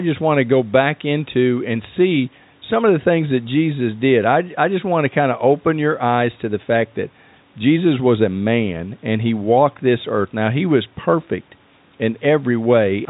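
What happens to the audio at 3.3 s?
Nothing goes wrong at 3.3 s: the speech there comes through intact, carrying only the narrow telephone band of the call path with no dropout, click or distortion.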